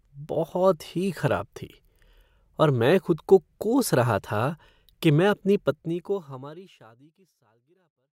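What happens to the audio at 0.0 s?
At 0.0 s the speech begins cleanly, with no fault at that moment.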